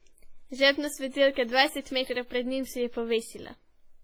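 From the start the speech sounds washy and ringing, with a hiss that swells and fades along with the voice, and some quieter detail seems to drop out entirely. That is heavy WMA compression damage, likely from encoding at a low bitrate, with the character pointing to something around 24 kbps. The transform codec spreads its quantisation noise over tens of milliseconds and zeroes weak spectral lines, leaving the voice smeared.

At 1.10 s a brief hiss creeps in just before a sharp onset, lasting about 34 ms until 1.13 s, and the attack itself lands soft rather than crisp. This is pre-echo. The attack fell late within a coding block, so noise sized for the loud moment was spread evenly across the whole block, filling the near-silence ahead of it.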